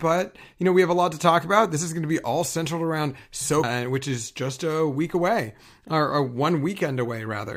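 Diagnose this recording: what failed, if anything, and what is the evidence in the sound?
Stream segment skipped (network): at 3.63 s the speech jumps from "be all centered around" to "which is just a" with a blip, likely an unloaded segment.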